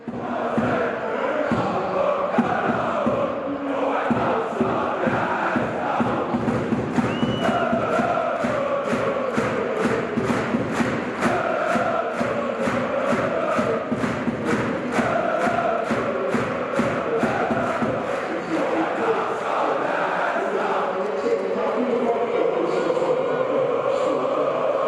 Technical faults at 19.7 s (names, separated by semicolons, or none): none